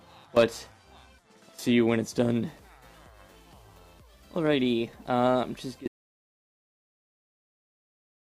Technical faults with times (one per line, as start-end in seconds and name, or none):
5.88-8.34 audio dropout to silence